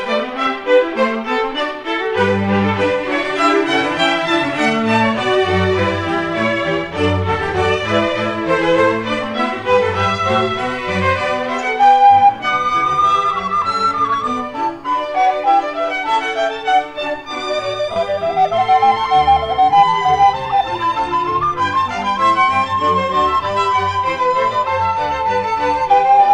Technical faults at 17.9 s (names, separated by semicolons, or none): lost LE Audio frames